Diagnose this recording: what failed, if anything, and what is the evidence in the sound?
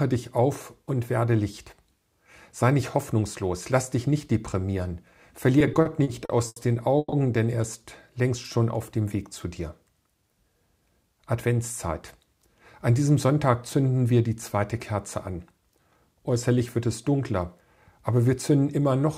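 Repeated stalls (stutter) from 5.59 to 6.59 s, a network and jitter-buffer problem. Packets kept showing up late, so the buffer ran dry seven times and the receiver stretched the last sound to cover about 250 ms, a quarter of that second. The longest hold is 90 ms. Nothing's lost, but the audio drags and hiccups.

Right after, at 6.98 to 7.15 s, there's a call audio freeze. The sound hangs for 140 ms as a fading continuation, with the last 30 ms gone silent, then resumes where it stopped with nothing missing. It's likely a network hold-up that drained the jitter buffer, adding 140 ms of delay.

Jitter buffer speed-up happens twice: 10.04 to 10.49 s at 114% speed, trimming about 70 ms, and 18.19 to 18.59 s at 108%, trimming about 40 ms. The buffer was holding too much backlog, so the receiver cut out pitch-period-sized slices to catch up. That's why those stretches sound hurried at the same pitch.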